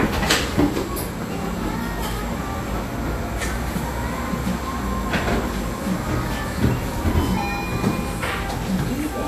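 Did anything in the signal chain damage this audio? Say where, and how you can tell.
Yes, at the codec stage, for the whole clip. The top end is cut off early and the remaining treble is hissy and grainy, with roughened tones and softened attacks, which is likely Vorbis compression at a low rate, around 34 kbps. The encoder keeps a smooth spectral outline but quantises the fine treble so coarsely that detail becomes noise of similar energy. Broadband hiss from analogue gear would sit evenly under everything, while this grain tracks the content.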